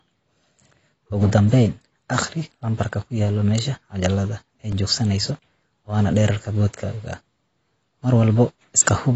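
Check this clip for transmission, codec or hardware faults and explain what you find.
Two faults are present, one lasting the whole clip and one occurring twice.

Throughout, the speech sounds dull and smeared, with nothing above 8 kHz and a fizzy texture on sibilants, likely AAC compression at a low bitrate near 24 kbps.

At 2.84 s and 4.72 s, brief ticks break the sound. Each is a block of digital silence, 5.3 ms and 2.7 ms long, consistent with 256- and 128-sample blocks left unfilled.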